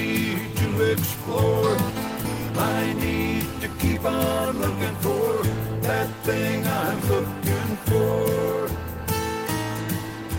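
Nothing stood out on listening to this recording.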